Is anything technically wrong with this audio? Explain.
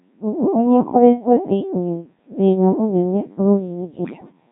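Yes. The speech has passed through the Codec 2 vocoder for the whole clip, and heavily. Codec 2 sends no waveform. It sends only pitch, voicing, energy and a coarse spectral envelope, then rebuilds the voice from sine waves. The result sounds robotic and buzzy. The coarse detail points to a very low rate, which fits Codec 2 at around 1.3 kbit/s.

Near the end, from 4.05 to 4.32 s, bit errors on digital voice radio break the sound further. Flipped bits reached the vocoder. At this low rate each bit sets the pitch, level, voicing or spectrum of a whole frame. Here roughly one bit in ten was wrong. Over those 0.27 s, the stretch suggests about six damaged frames. The voice jumps in pitch and loudness. It turns into warbles and garbled robotic bleeps.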